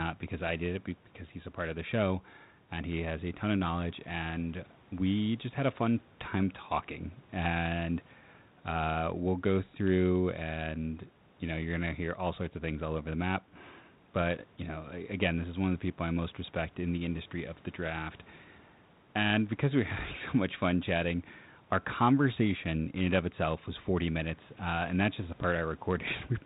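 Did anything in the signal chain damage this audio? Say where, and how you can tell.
No, nothing along the way has damaged this speech. It's come over a G.726 ADPCM link at 32 kbit/s, and all you can hear of that is the telephone band topping out around 4 kHz and a touch of light coding wear.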